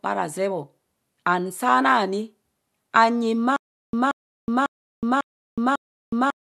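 At 3.56 s the speech breaks into a stutter with silent gaps that lasts to the end. A 179 ms burst of the same sound plays, then about 369 ms of dead digital silence follows. The pattern repeats five times, once every 548 ms. The likely cause is a stalled player or stream that replayed its last fragment at each retry and then ran dry. The speech that belonged in those gaps never arrives.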